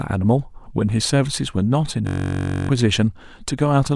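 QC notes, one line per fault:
2.07–2.69 s, system hang loop: The system froze while the hardware kept replaying its ring buffer. One 21.33 ms slice of speech repeats 29 times, giving a steady buzz at 46.9 Hz. That fits a 512-sample buffer. Roughly 0.7 s of audio is lost.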